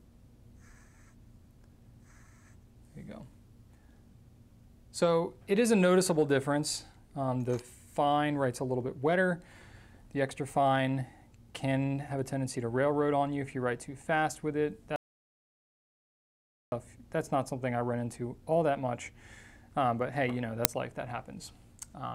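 An audio dropout to silence runs from 14.96 to 16.72 s: the sound stops abruptly and about 1.76 s passes in silence, with no room tone, before it resumes mid-flow. The likely cause is a lost input, such as a disconnected device or broken link, while the recorder kept writing silence, so whatever happened in that stretch is unrecoverable. An uninitialised buffer appears at 20.65 s as a loud 2.9 ms crack, which fits a 128-sample block being played before any audio had been written into it, so stale memory contents came out as samples.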